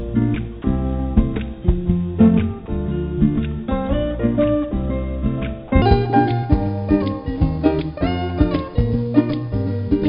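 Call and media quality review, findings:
Brief dropout to steady hiss, 0.62–0.64 s, 20 ms of sound replaced by comfort noise. Likely sound dropped by the voice detector: sender judged the signal as background and stopped transmitting.

Sudden jump to high, hurried playback from 5.82 s to the end, running 1.35 times too fast and about five semitones sharp. Likely section at the wrong speed, played against the wrong clock.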